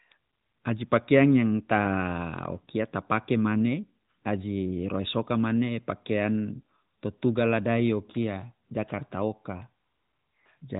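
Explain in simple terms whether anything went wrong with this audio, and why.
Nothing went wrong here: the speech has the narrow, phone-like sound of an ordinary mobile call, which is simply how the AMR narrowband mobile codec carries a voice, and there is no problem to point to at any moment.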